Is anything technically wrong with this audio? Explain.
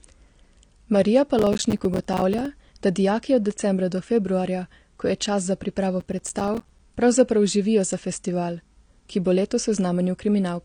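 Yes, two problems can be heard in this speech clip.

Throughout, the audio is band-limited, with nothing above about 9.7 kHz, and it sounds dull and smeared, with a warbly, fizzy edge on sibilants. This is likely AAC compression at a low bitrate, consistent with AAC-LC near 32 kbps. At that rate the encoder lowers its cut-off and quantises the remaining spectrum coarsely against its hearing model, leaving gaps and noisy bands that produce the smearing and fizz.

Processor overload crackle occurs from 1.39 to 2.46 s and again from 6.00 to 6.79 s. In each stretch the processor falls behind and repeatedly fails to deliver its short audio buffers, each roughly 5 ms long, dozens in a row. Every missed buffer drops out to silence with hard edges. Those rapid chopped gaps merge into a gritty, tearing crackle over the speech that stops once the load eases.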